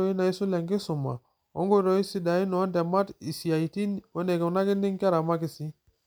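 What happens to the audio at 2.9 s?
Nothing goes wrong at 2.9 s; the speech carries on intact through that moment with no dropout, glitch or distortion.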